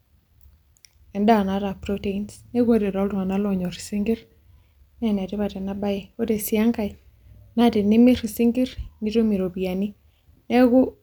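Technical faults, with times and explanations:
2.66–4.46 s and 6.94–7.61 s, drift correction step: the speech slows by about 5.9% and drops about 106 cents, roughly a semitone, then snaps back to normal rate and pitch, likely a clock-matching resampler changing playback rate in one step to rebalance its buffer.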